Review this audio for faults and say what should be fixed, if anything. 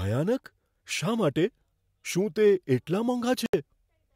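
At 3.46 s the speech cuts to silence for about 74 ms, resuming at 3.54 s. That points to a likely Bluetooth stall: radio interference held back packets, the headphones' buffer ran empty, and playback paused until the resent packets arrived. Reducing interference by moving closer to the source or away from busy 2.4 GHz devices would prevent it.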